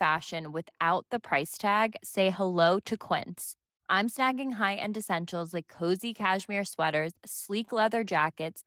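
Nothing here stands out as a fault, just ordinary speech carried by Opus voice compression in its hybrid mode at around 20 kbps, with the light coding you'd expect at that rate.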